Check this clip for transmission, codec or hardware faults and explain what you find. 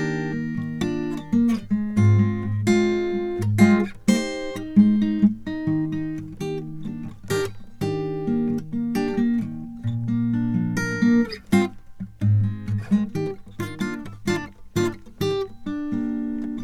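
Listening through this music, nothing stood out as a transmission, codec or hardware problem.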